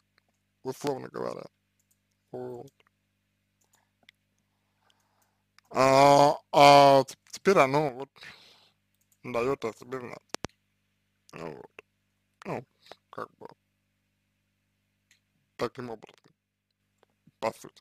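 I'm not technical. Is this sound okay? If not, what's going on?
No, there are two kinds of fault. A loud pop lands at 0.87 to 0.89 s, and another at 10.35 to 10.47 s that is really two pops in quick succession, the second pair noticeably louder, standing well above the surrounding sound. These likely come from a sudden jolt of electricity, such as a plug, a switch or a spark of static, added on top of the recording. The sound carries on underneath the pop.

One channel drops out from 7.89 to 8.24 s and again from 15.73 to 16.80 s. A stereo recording has a left and a right side, and here one side likely went silent for those moments. When both sides are combined, the sound abruptly drops to noticeably quieter and is otherwise unchanged until it returns.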